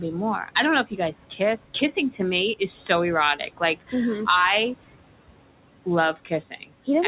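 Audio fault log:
Throughout, noise suppressor artifacts: the background noise, which sits about 16 dB below the speech, is pulled down by about 18 dB in the gaps and swells back under each phrase. The suppressor decides band by band and frame by frame what counts as steady noise, so the leftover noise pumps with the speech.
0.84–1.14 s, 1.3–1.41 s, 3.36–3.94 s, 6.14–6.32 s and 6.5–6.88 s, speech cut by the noise suppressor: just after "more I don't know" and after "to me is so", and at the three other spots, parts of the speech dip by about 11 to 17 dB, deepest in the third and fifth. The suppressor mistook parts of the speech for background and turned them down with it, so each span has about a tenth to a fifth of a second where syllables sound swallowed or faint.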